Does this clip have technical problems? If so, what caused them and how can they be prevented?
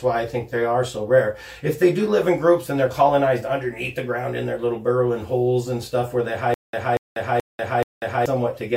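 Yes. From 6.54 to 8.26 s there is a stutter with silent gaps: a 237 ms fragment plays four times at a steady 429 ms period, each repeat followed by about 192 ms of digital silence. The likely cause is a stalled stream or player replaying its last buffered fragment at each retry. The audio that should have played is lost. Deeper buffering and a stable delivery path would prevent the stall.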